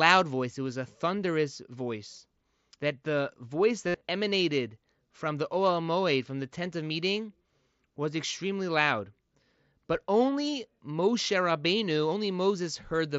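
From 3.87 to 4.01 s, after "the voice" and before "emanated from the", there is concealed Bluetooth headset packet loss. About 105 ms of speech is missing across 135 ms. Repeated recent waveform fills the gaps. The longest run, near 68 ms, buzzes, then warbles.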